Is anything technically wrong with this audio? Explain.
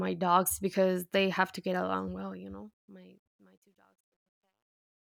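Yes. Truncation distortion on a fade runs from 2.05 s to 5.11 s, during the speech's fade-out that starts at about 2 s. The gain stage drops the level but keeps too few bits and adds no dither, which fits a 12-bit word length, so the quiet tail is rounded into coarse square steps. From 3.3 s to 5.12 s the sound turns gritty.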